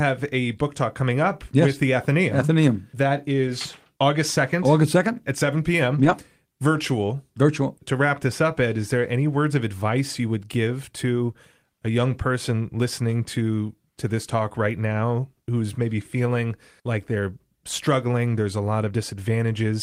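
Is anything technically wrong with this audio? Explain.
Yes. There are two stretches of lost packets rebuilt from error correction, at 3.47–3.49 s (20 ms) and at 5.91–6.13 s (120 ms, from six separate packets). The decoder filled each gap with low-bitrate copies carried in later packets, so nothing drops out, but those stretches of speech sound rougher and noisier.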